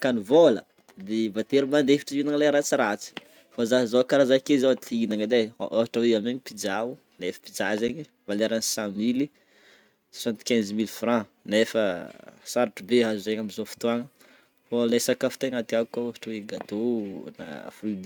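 A block of digital silence hits this speech at 5.11 s and again at 7.88 s. The sound cuts straight out with no fade, about 1 ms the first time and 10 ms the second, so the abrupt edges make a tick, then a second tick or dip.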